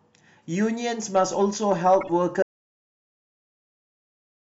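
At 2.01 to 2.10 s there's a corrupt frame decoded: a few damaged compressed frames got played anyway, so the speech breaks into a short squeaky, noisy blip. Then from 2.42 s to the end it's an audio dropout to silence, dead silence with no room tone, most likely the input getting lost while the recording kept going.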